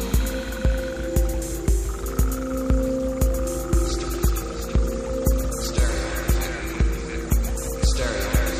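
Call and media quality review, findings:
Adaptive stream at a lower bitrate from 3.83 s to end. Abrupt, gapless quality step; treble thins, nothing above 15.3 kHz, swirly codec artefacts rise. Probable component: adaptive streaming client switching down a rendition after throughput fell. Sound points to an MP3 encode dropping from roughly 128 kbit/s to 48 kbit/s, with the encoder discarding high-frequency detail to fit the lower rate.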